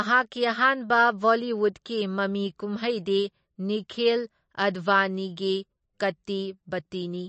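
From start to end, the speech carries plainly audible damage from MP3 compression, the likely cause. Nothing is present above 8.3 kHz. That ceiling is the fixed treble cut most encoders apply. The damage level fits a low bitrate of around 35 kbps. With so few bits, weak frequency lines are dropped and return from frame to frame. The result sounds watery and swirly. The s sounds turn dull and metallic.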